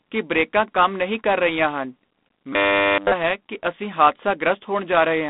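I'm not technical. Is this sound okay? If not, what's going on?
No. Two things are wrong.

The whole recording has G.726 ADPCM damage. This is an old telephone coding method. It saves space by sending only a rough guess of how each moment of sound differs from the last. Here it is set to a low-quality mode. That leaves a harsh, rasping hiss that gets louder when the speech gets louder. Everything above about 3.8 kHz is gone, so the voice sounds muffled and phone-like.

From 2.53 to 3.12 s, the speech turns into robotic sound from repeated short buffers. It becomes a stiff, metallic buzz at about 100 Hz. The buzz still roughly follows the speech. The likely cause is that the playback ran out of fresh audio. It kept replaying the last tiny slice, about 10 milliseconds, while the real sound was skipped. All of that stretch is repeats.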